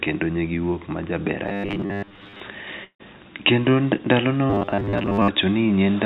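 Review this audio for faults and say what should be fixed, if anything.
From 1.47 to 2.40 s and again from 4.50 to 5.30 s the speech turns into a rigid metallic buzz at 100 Hz. The likely cause is robotic sound from repeated short buffers: audio arrived too late, so a 10 ms slice was replayed instead of the real signal, covering most of the first stretch and about half of the second. A spectrogram would show evenly spaced 100 Hz harmonics replacing the natural pitch, and the waveform would show identical 10 ms cycles. Prevention: give the jitter buffer more headroom and fix the scheduling delays that starve the playout.

From 2.84 to 3.01 s there is a likely long network dropout. About 160 ms of audio is missing, and a fading continuation of the last sound covers roughly 150 ms of it before about 110 ms of near silence. On a spectrogram this appears as a smeared, decaying band that gives way to an empty gap, and the waveform's envelope tapers to almost nothing. 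Prevention: improve network stability or add redundancy such as forward error correction.

At 3.97 to 4.01 s there is short concealed packet loss. About 20 ms never arrived, and 12 ms was filled by extending the preceding sound before it blended back into the real audio, which is heard as a brief smear. A spectrogram shows a tiny blurred patch, and the waveform shows a short, slightly repetitive splice. Prevention: reduce packet loss on the link or enable redundancy for isolated losses.

The call path's band limit, with nothing above 4 kHz, fits G.711 mu-law coding.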